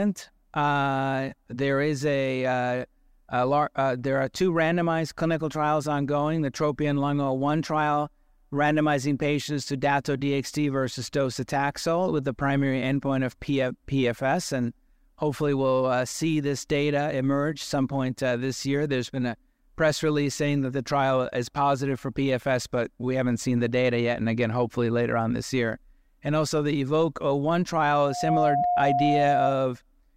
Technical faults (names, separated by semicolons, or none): loudspeaker feedback squeal